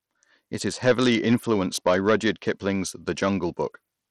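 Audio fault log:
throughout: Bluetooth SBC compression. The speech has plainly audible codec damage: the top end thins out and flickers, and a gritty, grainy noise with some aliasing clings to every syllable. This is likely an SBC link running at a low rate, around 80 kbps. At that rate the weak upper sub-bands get few or no bits, and the remaining bands are quantised coarsely, with no hearing model to decide where the errors will be least noticed.
0.86–2.5 s: hard clipping. For this stretch the signal is driven about 8 dB past what a stage in the chain can pass, so the speech peaks are sliced flat. Those squared-off tops generate a spray of high harmonics, which sounds like a harsh, buzzy fuzz on the louder parts of the speech rather than occasional crackle. The distortion ends abruptly once the level comes back under the limit.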